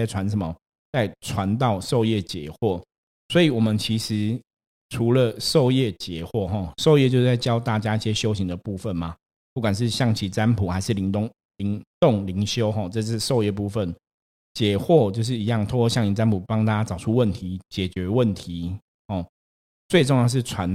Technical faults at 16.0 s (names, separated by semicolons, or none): none